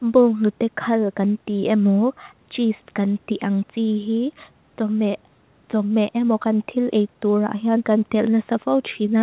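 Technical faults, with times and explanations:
Nothing stood out on listening to this speech, which carries the narrow, telephone-like sound expected of a call path that passes nothing above 4 kHz.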